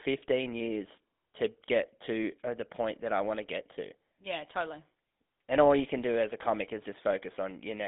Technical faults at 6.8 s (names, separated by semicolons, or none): GSM full-rate codec